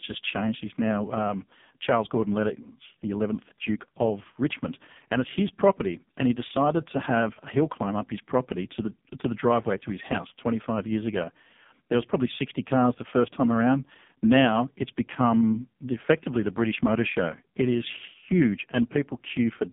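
From start to finish the speech carries AMR narrowband mobile codec damage, and it is heavy. The band is squeezed to roughly 150 Hz to 3.6 kHz, with nothing above 3.7 kHz. The voice sounds buzzy and synthetic, as if rebuilt from a sparse vocal-tract model, which fits AMR-NB's lowest mode of about 4.75 kbps. A plain low-pass filter would only dull the sound, but here the timbre itself is coarsened.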